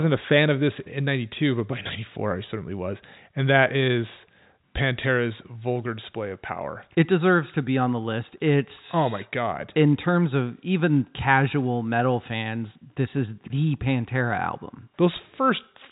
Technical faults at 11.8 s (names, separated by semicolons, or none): none